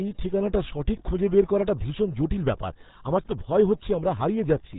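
From start to finish the speech carries the RealAudio 14.4 codec sound: nothing above about 3.8 kHz survives, so it's muffled, and the heavy coding damage leaves a gargly, watery texture, which fits a very low 8 kbit/s dial-up-era speech codec.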